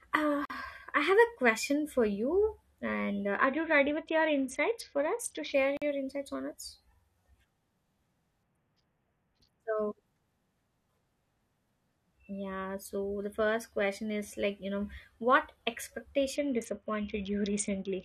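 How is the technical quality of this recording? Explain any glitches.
The speech has two recurring glitches: short dropouts to total silence and stretches where the audio turns dull and gritty.

A block of digital silence hits at 0.45–0.50 s, just before "I have a question", and again at 5.77–5.82 s, just before "insights on us". Each 46 ms gap fits a 2048-sample buffer that wasn't filled in time. The sound cuts abruptly to nothing and back, leaving a short hole.

A Bluetooth SBC bit pool drop occurs at 3.36–5.54 s, 8.43–9.62 s and from 16.36 s to the end. The sound points to the link falling from a bit pool of 28 to about 6, roughly 60 kbps. Starved of bits, the upper bands get few or no bits and the rest are coarsely quantised, so the treble dulls and gritty noise rises.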